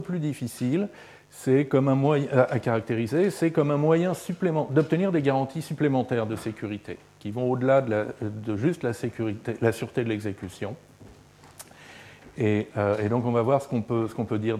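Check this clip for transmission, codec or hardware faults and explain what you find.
One hardware fault runs through the whole clip: a mains buzz. Sharp switching spikes from the 50 Hz supply leak in, stacking harmonics into the kilohertz range. The result is a raspy buzz roughly 35 dB below the signal, coarser than a smooth, low-pitched hum.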